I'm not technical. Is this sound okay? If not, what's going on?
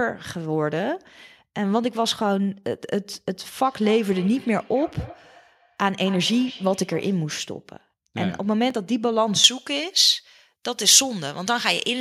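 No, it has three problems.

From 3.59 to 7.31 seconds there is feedback echo between two devices. Each sound comes back about a third of a second later, faint, and thinner and more ringing than the original. This happens when two phones or computers in the same room join one call. One plays what the other picked up, and that microphone hears it again. Each device only cancels its own echo, so this one gets through.

There are two tiny skips, at 3.72 and 8.70 seconds. A very small piece of sound, about a fiftieth of a second, is missing each time. The two sides are joined with no pause, so it sounds like a small jump. They are about five seconds apart. That points to audio missing between chunks, likely from a recorder that works in five-second pieces and drops a sliver each time it starts a new one.

From 9.44 seconds to the end, the sound turns thin, bright and hissy. The s sounds are sharp. 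This is pre-emphasis left on. Some systems boost the treble when they record or send sound and then remove the boost on playback. Here the removal step never happened. The extra treble stays in, so the top end is too strong for the last part of the clip.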